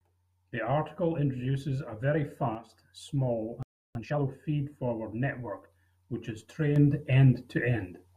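At 2.55 s a sudden gain jump occurs. A digital gain setting was likely applied in a single step with no ramp, cutting the level by about 6 dB from one sample to the next. The speech and its background noise drop together, abruptly enough to sound like a slip in level rather than a fade. The level snaps back up at 2.72 s, so the dip lasts only about 0.17 s.

At 3.63 s there is a playback stall, most likely because the player's buffer ran dry or its output thread was held up. The audio cuts to silence in mid-flow for about 324 ms, and the speech resumes at 3.95 s.

From 3.95 s to 4.27 s comes a time-compressed catch-up. To clear the backlog built up during the gap, the player drops short slices of audio and cross-fades across the joins, running at about 2x speed. The speech sounds rushed but stays at its normal pitch.

A second sudden gain jump arrives at 6.76 s and lasts to the end of the clip. 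This time an unramped gain change, likely a setting applied instantly, raises the level by about 6 dB. Speech and noise floor step up together at once and stay louder for the final stretch.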